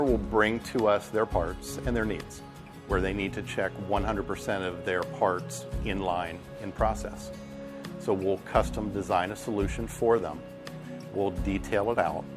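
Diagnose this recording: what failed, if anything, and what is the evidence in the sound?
Nothing failed; no faults detected.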